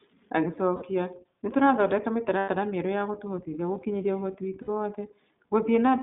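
Speech carried by the iLBC codec. The band stops near 150 Hz and 3.7 kHz, and the sound is plainly rough and synthetic, which fits 20 ms frames at 15.2 kbps. Lost iLBC frames cause held, buzzy vowel-like fills at 0.76–0.83 s, at 2.38–2.49 s just before "mĩerũ yagũtũhotithia", and at 4.62–4.70 s just after "ũhoti witũ". Each gap lasts 60 to 100 ms. The speech recovers at once.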